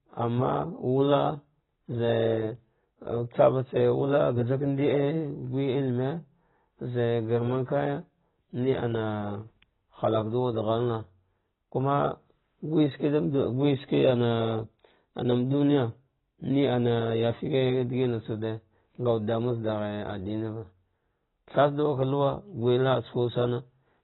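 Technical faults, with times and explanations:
Throughout, AAC compression: the speech is dull, with nothing above 4 kHz, and sibilants and sustained sounds smear into a warbling, fizzy texture. Unlike a plain low-pass filter, what remains also sounds hollow and unstable, likely from AAC-LC coding at a very low bitrate, around 16 kbps.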